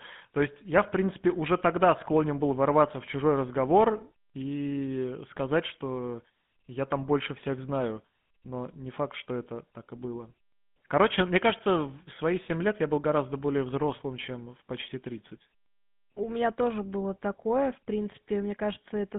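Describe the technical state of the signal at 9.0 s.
At 9.0 s the speech carries GSM full-rate codec damage, present across the whole clip rather than at that moment alone. The codec rebuilds the voice from a vocal-tract filter driven by sparse, regularly spaced pulses, giving a plainly audible buzzy, gravelly roughness that fits a 13 kbps GSM full-rate stream. Simple telephone band-limiting would sound muffled but clean within its 150 Hz to 3.5 kHz band, whereas this has a coarse, granular grain layered on top.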